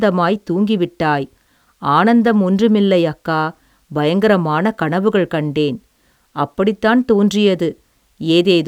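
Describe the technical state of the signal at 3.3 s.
At 3.3 s the speech signal is intact, with no audible fault at that point.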